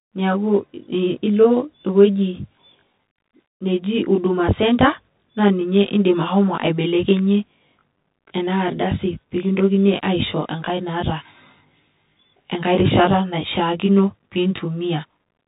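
From the first second to the end, the speech sounds rough and slightly doubled. That's channel delay causing comb filtering: one channel runs roughly 20 ms behind the other, and summing them to mono carves a row of evenly spaced notches starting down around 30 Hz.

Also present all the way through is the Bluetooth CVSD headset codec, and its damage is plainly audible. Everything above 3.8 kHz is gone, the s sounds come out scratchy, and a grainy hiss sits under the speech. The quality fits a 64 kbps CVSD link, where the one-bit step tracking can't keep up with sharp, bright sounds.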